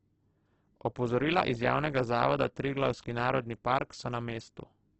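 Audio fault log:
throughout – Opus compression: speech sounds grainy and rough, likely from heavy coding near 12 kbps that fills bands with noise; spectrogram shows speckled bands and nothing above 8.2 kHz.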